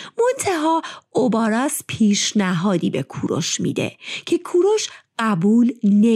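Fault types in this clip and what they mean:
No fault types are present in this clip.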